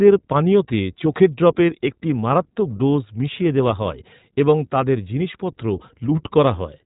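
Speech that's been through the iLBC codec the whole way: nothing above 4 kHz, and a rough, slightly synthetic edge that fits 20 ms frames at 15.2 kbps.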